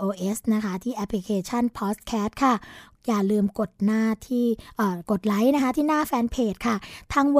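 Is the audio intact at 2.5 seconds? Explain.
Yes, at 2.5 seconds the speech runs through cleanly, with no dropout, click, distortion or other fault at that point.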